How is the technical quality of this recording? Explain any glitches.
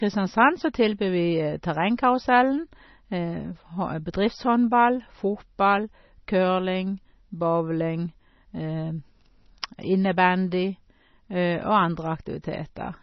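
The quality is poor: the whole recording carries heavy MP3 compression damage. Throughout the speech, nothing survives above about 5.9 kHz, and the sound is watery and swirly, with metallic chirping on s sounds and smeared consonant attacks. This likely comes from encoding at a very low bitrate, consistent with around 24 kbps, where the encoder cuts the treble and switches weak frequency lines on and off between frames. A simple low-pass filter would dull the top without the swirl.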